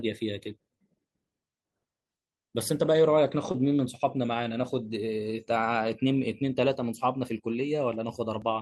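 Speech, with two brief faults. From 3.51 to 3.56 s there is a short concealed packet loss: about 20 ms of audio failed to arrive in time, and the receiver bridged the gap by extending the preceding sound for roughly 23 ms before easing back into the real signal, which is heard as a momentary smear or wobble. At 8.42 s there is a small forward jump in the sound, a few milliseconds skipped with no silence, likely a dropped buffer (overrun) where the samples were overwritten before being read.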